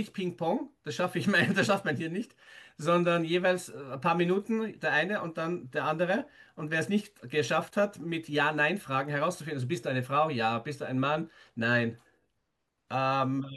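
No technical faults can be heard in this speech recording. There is nothing here that needs a time mark or a fix.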